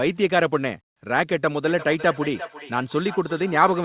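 Speech clip with feedback echo between two devices, from 1.64 s to the end. The sound returns at a fixed interval of roughly 0.4 s, each repeat thinner and more ringing, peaking at about 14 dB below the direct speech. A second device in the room is playing the call audio into a live microphone, and each device's echo canceller only removes its own playback, so the loop survives. The band stops at 4 kHz, which fits narrowband telephone coding.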